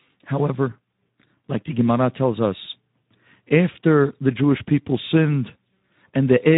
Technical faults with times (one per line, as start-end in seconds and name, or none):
0.00-6.58 Speex codec